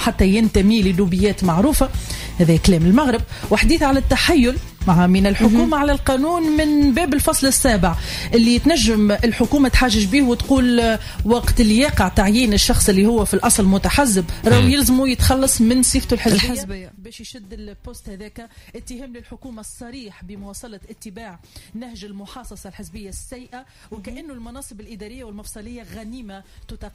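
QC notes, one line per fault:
16.27–16.89 s, zipper noise: the level falls about 20 dB in unsmoothed steps, roughly 150 per second. Each step clicks, producing a rapid zipping buzz.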